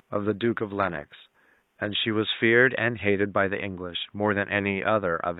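From 0.0 to 2.0 s, an adaptive stream starting at a low bitrate gives synthetic treble that fits HE-AAC near 20 kbit/s, then jumps gaplessly to AAC-LC at 96 kbit/s, unlike a dropout.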